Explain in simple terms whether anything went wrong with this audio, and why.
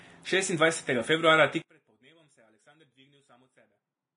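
Two things went wrong here. The whole recording sounds hissy and grainy, with nothing above about 10.6 kHz, so the speech loses its crisp top end. That's likely heavy Vorbis compression, which smears fine detail into a sort of noisy fuzz.

Then from 1.62 s to the end, the speech suddenly drops to a faint trace when played as mono. The likely cause is one channel inverted, so the two sides cancel each other out instead of adding up.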